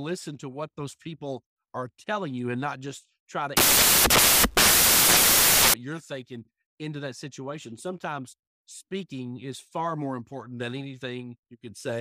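Samples built from the wrong bytes take over the speech from 3.57 s to 5.74 s, starting right after "and not just try" and clearing before "you're thinking into that". Across this stretch each sample's bytes are being joined wrongly, so the rapidly fluctuating low-order bits end up as the dominant part of every value. The result is a blast of loud, harsh broadband noise, close to white on the louder sounds.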